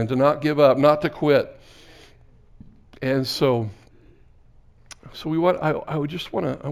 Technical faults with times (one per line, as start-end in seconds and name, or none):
0.00-6.71 imaging from linear upsampling